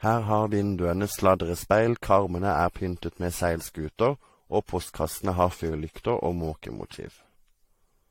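Generation loss runs through the whole clip. The speech sounds swirly and hollow, with a smeared quality. Consonant attacks are blurred rather than crisp. Nothing is heard above 16.6 kHz. The damage is heavier than a single moderate-rate encode would leave. The likely cause is repeated lossy coding, around five passes. The character fits AAC-LC at roughly 64 kbit/s. Each pass requantises on a shifted frame grid. Noise and spectral gaps build up.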